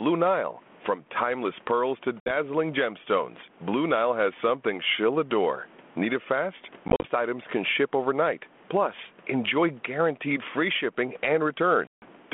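Speech over a narrowband phone line, consistent with 32 kbit/s G.726 ADPCM passing roughly 200 Hz to 3.4 kHz, carries gain pumping throughout. The room background sits about 39 dB below the speech, and the gain swings by roughly 15 dB, pulling loud and soft parts closer together. This is likely an overdriven microphone gain caught by a fast limiter. Unlike a noise gate, the background never fully cuts out. There is also packet loss on an ADPCM call. A hard-edged 60 ms silence at 2.2 s follows "timeless pearls to". Between 6.88 and 7.07 s, after "it fast" and before "items can ship overnight", about 90 ms is lost in scattered gaps, the longest 40 ms. A 150 ms hole falls at 11.87 s. What sets this apart from a plain dropout is that each return comes back slightly distorted before settling, because the decoder's predictor has drifted out of step with the sender's.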